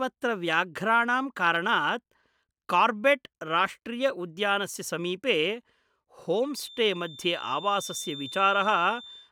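A speech recording with a feedback whistle in its last part. From 6.49 s to the end, a thin, steady tone sits behind the speech at 3.6 kHz. It stays well below the speech, roughly 15 dB down, and swells and fades slowly in level. It never swells into a full howl. The likely cause is a loudspeaker-to-microphone loop held just at the edge of feedback, so one frequency keeps ringing without growing.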